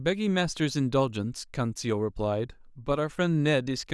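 Nothing stood out as a technical fault on listening to the speech in this recording.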